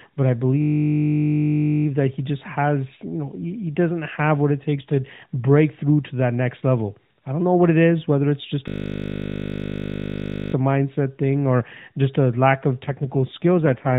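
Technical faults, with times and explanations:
0.62–1.86 s and 8.68–10.54 s, system hang loop: after "but I" and "is whether it's just", a 20 ms piece repeats exactly, making a steady 50 Hz buzz until playback resumes.
12.86–13.98 s, AMR rate drop: after "just a lack of", the voice turns rougher and more synthetic to the end, which fits the mobile codec stepping down from 12.2 to 5.9 kbps.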